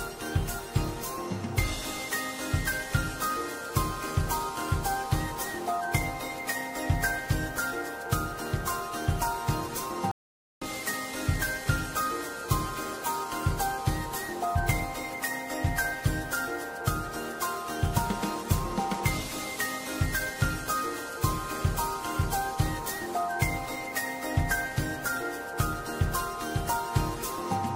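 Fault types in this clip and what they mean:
Stream reconnect at 10.11 to 10.65 s: the connection drops and playback goes silent for 500 ms while the player reconnects and starts a fresh decoder mid-stream, so the sound resumes about half a second further on, skipping that stretch.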